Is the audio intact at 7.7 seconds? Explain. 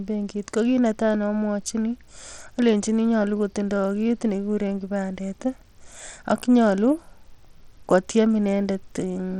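No. At 7.7 seconds, as across the whole speech clip, the treble thins and flickers while a gritty, aliased haze clings to the sound. This plainly audible damage likely comes from Bluetooth SBC compression, whose crude sub-band bit allocation starves the upper bands, which fits a low bitrate near 80 kbps.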